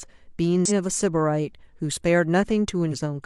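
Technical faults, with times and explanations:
0.65–0.71 s and 2.88–2.93 s, damaged data in a compressed stream: two short glitches of about 60 and 50 ms break into the speech. Corrupted bytes in the encoded stream made the decoder misread those frames and lose sync until it found the next valid frame header.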